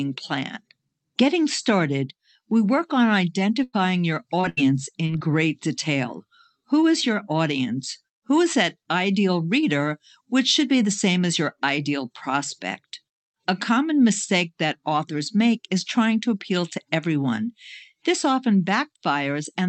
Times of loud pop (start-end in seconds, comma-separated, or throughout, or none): none